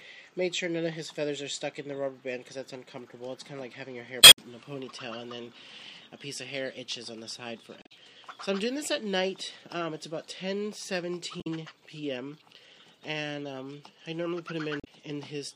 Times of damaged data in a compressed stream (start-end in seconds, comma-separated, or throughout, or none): 4.19-4.38, 7.79-7.92, 11.38-11.47, 14.77-14.87